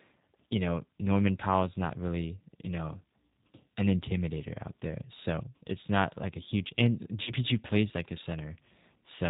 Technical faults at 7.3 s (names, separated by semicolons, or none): G.729 codec; VoIP packet loss concealed by the speech codec